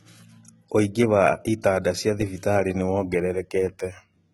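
Throughout, the encoder likely coded only the lower spectrum and rebuilt the treble by HE-AAC compression, copying bands upward under a coarse envelope. The heavy damage fits a bitrate near 16 kbps: s sounds turn gritty and lispy, and nothing remains above 11.8 kHz.

From 2.99 s to the end, sample clock jitter sets in. The converter clock wanders by a couple of microseconds, so samples land early or late. This adds a rough hiss, around 40 dB below the speech, that thickens on loud, bright sounds.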